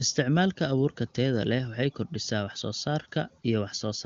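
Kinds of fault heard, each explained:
Nothing here counts as a fault: the speech comes over an AMR wideband (HD Voice) link at 23.85 kbit/s, the top rate, where any coding damage is faint at most.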